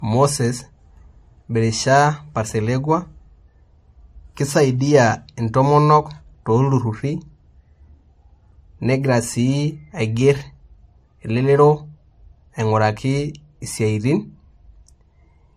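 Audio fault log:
Throughout, transcoding between lossy codecs. The speech carries two overlapping sets of compression artefacts, and nothing sounds above 15.2 kHz. The likely cause is an MP3 encode re-encoded as AAC-LC, both at about 48 kbit/s. The second codec keeps the first one's damage and adds its own.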